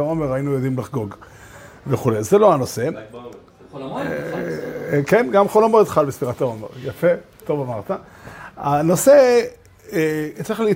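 From 2.12 to 3.48 s there is channel delay (comb filtering): one channel lags the other by about a single sample, and summing them to mono cancels the top. The first notch sits near 20 kHz, so the section sounds slightly dull.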